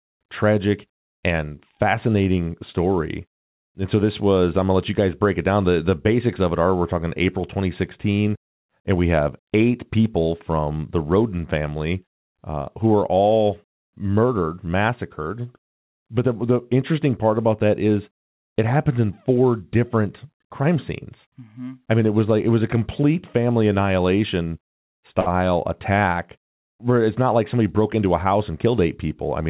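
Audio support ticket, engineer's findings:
Short stall from a late packet, 25.20–25.28 s, just before "attack where it's not". A 64 ms hold with slight buzz or dip. Jitter buffer ran dry and the decoder stretched the last sound until the packet arrived. Nothing lost; delay up 64 ms.

Jitter buffer speed-up, 29.21–29.49 s, to end of clip. Speech runs about 114% speed at unchanged pitch and sounds hurried. Receiver trimmed pitch-period slices, about 50 ms total, to drain excess buffered audio. Narrowband band limit at 4 kHz, consistent with G.711 mu-law.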